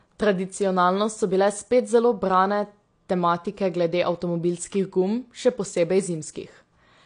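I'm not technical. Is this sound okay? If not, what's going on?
No. The speech carries AAC compression damage from start to finish, and it is plainly audible. Nothing above about 9.8 kHz survives, so the voice sounds dull and muffled, as if heard through a cloth. The cause is likely heavy squeezing of the file to save space: the encoder drops the high treble and roughly approximates the rest, which leaves a smeared, warbling or fizzy edge on held sounds and hissy consonants.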